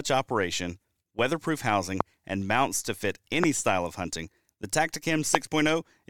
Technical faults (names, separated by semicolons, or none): loud pop